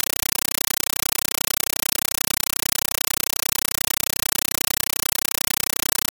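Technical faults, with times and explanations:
Throughout: compressed stream played as audio. In place of the programme there is very loud, chattering static: a burst of noise about 8 ms long followed by silence, repeating 31.25 times a second. An AC-3 bitstream arriving over a digital link was passed straight to the output as if it were ordinary samples. Each encoded frame becomes a short noise burst, and the zero padding that fills out the frame period becomes the gap. The density of the bursts fits a 384 kbps stream.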